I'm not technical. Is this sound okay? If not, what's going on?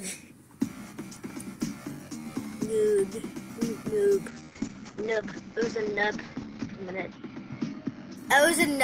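No. From 4.28 to 8.47 s there's a call bitrate drop: the connection squeezed the audio into far less data, so it turns rough and loses its crisp top end.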